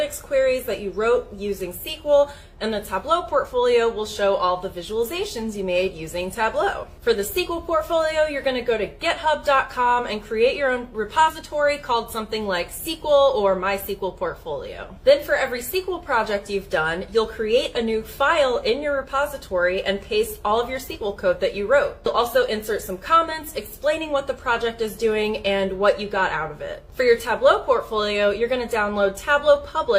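There's nothing here to flag, since no technical faults turn up anywhere in this clip.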